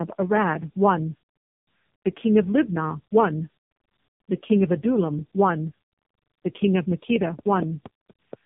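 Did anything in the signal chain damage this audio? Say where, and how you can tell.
Yes. The speech sounds rough, muffled and warbly throughout, with nothing above 3.6 kHz. That points to the codec stage and specifically to tandem speech coding. The grainy, smeared texture is consistent with two low-rate AMR-NB passes in a row, with a G.711 A-law hop between them. The second AMR-NB encoder had to model audio already degraded by the earlier passes, so their errors stacked and the result sounds worse than a single coding pass would.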